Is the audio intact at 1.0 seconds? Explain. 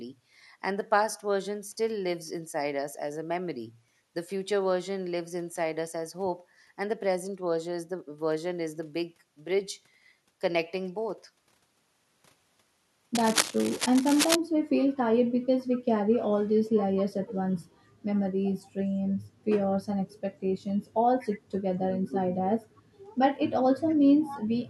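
Yes, the audio is intact at 1.0 seconds, with no fault present at that moment.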